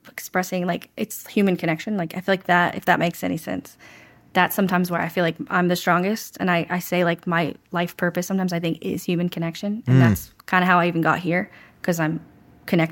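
No technical faults can be heard anywhere in this speech recording. Nothing interrupts or alters the sound at any point, so there are no events to place in time.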